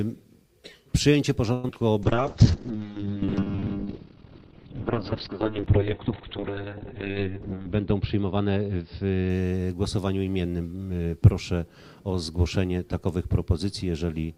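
At 1.53 s the audio stalls for about 104 ms: the last sound is drawn on as a fading buzz or hiss and then picks up exactly where it left off, with nothing lost. This is a call audio freeze, most likely packets held up in transit so the jitter buffer ran dry and the receiver had to extend what it last had. On a waveform it appears as a smooth, decaying tail rather than a hard gap, and on a spectrogram the final spectrum smears horizontally before real content resumes. Right after it come two instances of short concealed packet loss, one at 1.68 s and one from 1.74 to 1.76 s. In each, 20 ms and then 40 ms of audio never arrived, and the decoder bridged the holes with only 8 and 10 ms of synthesized continuation, so they read as brief smears where material is actually missing. The second also trims roughly 30 ms of accumulated delay. Both show as tiny discontinuities or blurred slivers in the spectrogram. 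From 2.03 to 9.86 s a call bitrate drop takes the encoder from 96 kbps down to 6 kbps, holding at that floor for about 4.3 s. Audible bandwidth collapses from 20 kHz to 4 kHz, so the sound turns muffled and watery. On a spectrogram everything above 4 kHz goes blank in a sharp horizontal ceiling, and the remaining band looks coarse and blotchy until the rate recovers. Inside that stretch, from 2.15 to 2.78 s, a jitter buffer slow-down repeats single pitch periods to rebuild the reserve. It adds 46 ms, so the audio plays at about 94% speed at unchanged pitch, with slightly stretched sounds. The waveform shows near-identical cycles duplicated back to back, while the spectrogram keeps its pitch lines but draws them out. Later, from 7.28 to 8.40 s, a jitter buffer speed-up does the reverse, cutting short pitch-period pieces to shed about a tenth of a second of excess delay. The audio runs at around 109% speed with the same pitch and sounds hurried. 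On the waveform, cycles are visibly dropped, and on the spectrogram events compress closer together in time without any shift in frequency.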